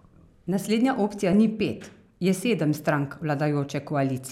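A corrupt frame decoded at 1.33 s, just before "ni pet je sedem", breaks into this speech clip as a brief glitch peaking around -15 dBFS. Flipped bits in a handful of compressed frames were played anyway, so misread codes and gains put energy at wrong frequencies.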